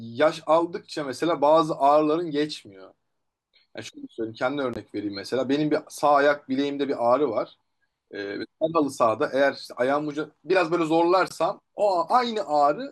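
At 4.74 s and 11.28 s the speech cuts abruptly to silence for about 35 ms, a corrupt frame muted by the decoder. Timing stays intact, unlike a skip, and nothing is concealed.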